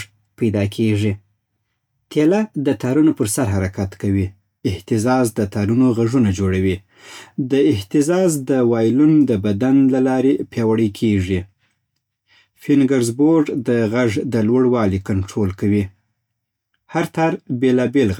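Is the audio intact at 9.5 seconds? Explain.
Yes, the audio at 9.5 seconds is intact, with no audible fault at that moment.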